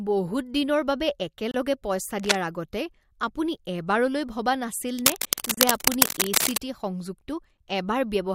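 At 1.51 to 1.54 s the speech drops out for about 29 ms: a gap between stream segments. Two segments' timestamps don't quite meet, so the player pads the space with digital silence. Nothing is lost; the sound simply stops and restarts with hard edges, heard as a tiny tick-like hiccup. On a waveform it is a flat-line notch with vertical walls; a spectrogram shows a thin, fully blank vertical stripe.

From 2.19 to 2.35 s a brief burst of scratching rides over the speech at roughly the same level: cable scratch noise, likely from a worn cable or connector being moved so its contact resistance jitters rapidly. It sounds like a rasp or rustle. The waveform shows a ragged, spiky fuzz, and the spectrogram a dense, uneven broadband smear.

A much longer, somewhat louder scratching episode runs from 4.99 to 6.57 s, again likely a disturbed connection, sitting several decibels above the speech as an irregular crackly rustle. 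The spectrogram shows patchy broadband noise clouding the speech harmonics, and the waveform a thickened, jagged envelope.

Inside that stretch, at 5.54 to 5.58 s, a second segment gap cuts in for about 31 ms, silencing both speech and scratch at once. It shows as a clean blank stripe through the noise. Its spacing from the first gap fits one-second segments.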